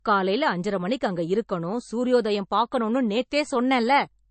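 From start to finish the speech has a watery, swirly quality, with nothing above about 8.3 kHz, which is likely MP3 compression at a low bitrate, around 35 kbps. The encoder is cutting the treble and dropping weak detail frame by frame, so the damage is plainly audible.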